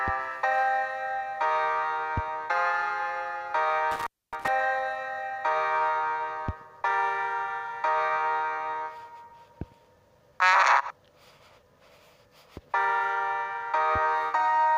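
At 3.91 s an intermittent contact interrupts the signal, with the disturbance lasting until about 4.48 s. A loose cable or plug connection momentarily loses continuity, and the line stays open for roughly 262 ms within that window. The audio drops out abruptly, with crackle marking the points where the contact breaks and then remakes. During the gap, a faint hiss remains where the sound should be.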